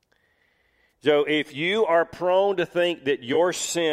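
At 0.91 s and again from 3.33 to 3.37 s, AAC frame loss with concealment produces brief smeared, phasey patches. The decoder patches the gaps, about 43 ms and 21 ms, fitting two lost frames then one, by reusing the last good spectrum, so unlike a plain dropout, the sound never falls to silence.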